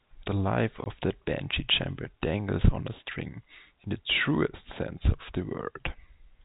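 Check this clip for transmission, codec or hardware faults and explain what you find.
One transmission fault stands out, against the narrow 4 kHz telephone band of the G.711 coding. From 0.84 to 0.86 s there is packet loss filled with silence: a 20 ms stretch, which fits a single lost packet, was replaced by digital silence. The result is a brief hard-edged hole. Concealment would instead smear or repeat the preceding sound rather than leave a dead gap.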